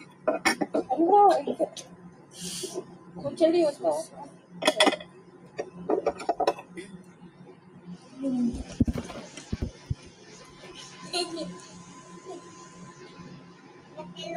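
A noise suppressor made for speech runs across the whole clip. It treats steady tones, ambience and reverb as noise to be removed. Its gain keeps shifting as it decides what to keep, over a range of around 15 dB. Attacks pass more freely than sustained material. So the sound pumps, flutters or thins out as held parts and tails are pulled down.

The suppressor also cuts particular stretches harder than the rest. This happens at 0.05 to 0.26 s, 1.91 to 2.34 s, 4.3 to 4.53 s, 5.05 to 5.58 s, 7.0 to 7.83 s and 13.43 to 13.97 s. In each, it takes the sound for noise and drops it by up to about 6 dB. Steady or decaying parts sink or end early. The longest cut, near 7 s, lasts most of a second.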